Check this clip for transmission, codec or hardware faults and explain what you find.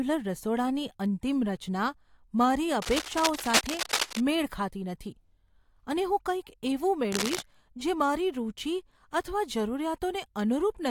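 Two bursts of cable scratch noise are present, from 2.82 to 4.22 s and from 7.12 to 7.42 s. They are likely from a worn cable or connector being moved. Its contact resistance jumped around. Uneven scratching rides over the speech, roughly 5 dB below it.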